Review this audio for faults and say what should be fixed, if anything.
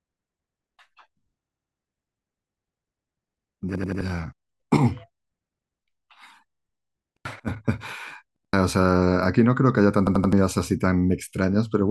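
Repeated buffer: new audio reached the output device late, so it replayed its last 85 ms block, which fits a 4096-sample buffer. Each time, this produces a stutter with a hard join at each repeat and up to about a third of a second of speech lost, at 1.45–1.79 s, 3.76–4.01 s, 7.17–7.25 s, 8.36–8.53 s and 10.07–10.33 s. Prevent it by keeping the output buffer fed on time, giving the audio thread higher priority or more buffering headroom.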